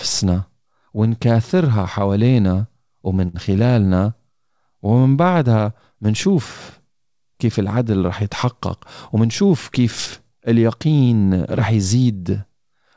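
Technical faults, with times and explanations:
3.28 to 3.36 s, short stall from a late packet: a packet arrived late, so about 58 ms of the preceding sound is stretched, nothing lost; spectrogram shows a smeared, held harmonic band.
9.15 to 9.79 s, jitter buffer speed-up: an overfull buffer trimmed pitch periods, roughly 40 ms in total, running speech 5% faster at unchanged pitch; waveform shows whole cycles dropped, with the remaining cycles unchanged in length.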